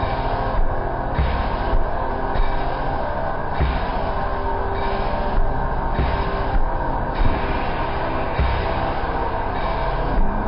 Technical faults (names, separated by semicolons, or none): wrong sample rate